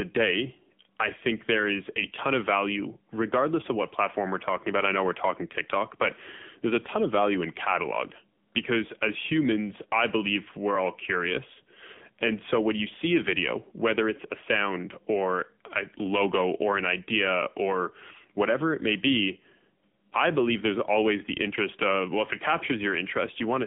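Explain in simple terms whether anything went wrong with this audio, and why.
Yes. For the whole clip, the speech went through the AMR narrowband mobile codec, the squeezing method used on older 2G and 3G phone calls. It keeps only a thin slice of sound, roughly 150 Hz to 3.5 kHz, and rebuilds the voice from a simplified model rather than the real sound. As a result, the speech sounds like an old phone line: muffled, with nothing above about 3.7 kHz, and plainly buzzy and synthetic.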